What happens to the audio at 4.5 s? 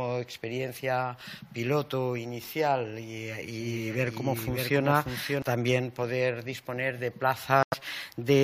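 At 4.5 s the audio has a doubled audio track. From 3.6 s to 5.42 s, a second full copy trails the original by about half a second, a few dB quieter. The copy has no decay and cuts in and out abruptly. A second capture by a slower path or two out-of-step copies in an edit are the likely cause.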